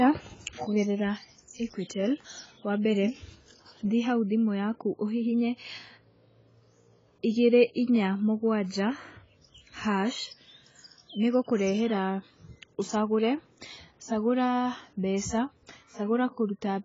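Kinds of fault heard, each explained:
AAC compression: The speech runs through the whole clip with nothing above about 7.6 kHz, so it sounds dull and closed-in. Heavy codec damage smears its texture throughout. This is likely lossy AAC-LC encoding at a very low bitrate, around 16 kbps. At that rate the encoder lowers its cut-off and spends its few bits on the strongest frequency lines against a hearing model, discarding the weaker detail.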